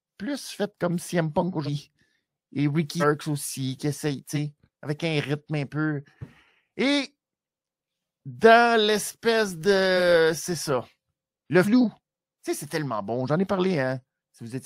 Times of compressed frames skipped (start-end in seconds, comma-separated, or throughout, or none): 1.65-1.69, 3.00-3.04, 4.34-4.37, 11.64-11.68